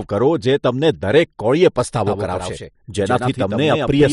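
From 2.07 s to the end, the speech becomes a doubled audio track: a full-band copy roughly 5 dB quieter trails at about a tenth of a second, likely from a second, slower capture path. It starts abruptly and sounds like a flat, undecayed stutter, and on a spectrogram every syllable pattern repeats with a fixed offset.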